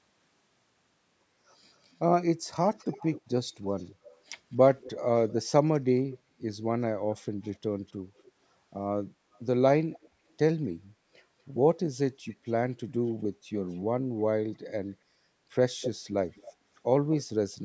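A delayed copy of the speech trails the talker by about a quarter of a second (243 to 252 ms) from 2.71 to 6.18 s, 7.44 to 8.32 s, 9.33 to 10.09 s, 12.3 to 13.78 s and 14.93 to 17.23 s. It starts about 20 dB down, sinks to about 30 to 35 dB below the speech, then returns at only about 10 dB down in the last stretch. This is an echo leak, likely from a far-end loudspeaker whose echo canceller let part of its microphone pickup return.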